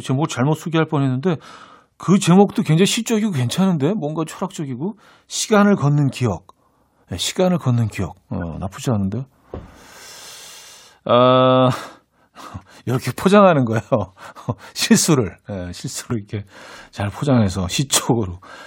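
At 16.10 s the speech gives a tiny forward lurch as roughly 20 ms of audio simply goes missing. This is compressed frames skipped: a stretch of the encoded stream was either absent or rejected by the decoder as damaged, so playback jumped ahead by the length of the frames left out.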